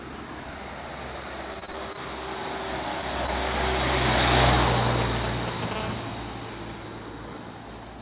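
From 1.54 to 1.99 s, repeated packet loss occurs: six gaps open in the audio and concealment stretches the preceding sound, so the audio turns choppy with pieces missing.

At 5.01 to 5.73 s, a nearby 2G phone's GSM signalling bursts are rectified by the audio circuit, giving galloping ticks and short 217 Hz buzzes nearly as loud as the sound.

From 5.76 to 6.81 s, a nearby phone's call transmission brings GSM phone buzz: a steady, raspy 217 Hz tone rich in harmonics, about 13 dB below the sound, over band-limited audio with nothing above 4 kHz.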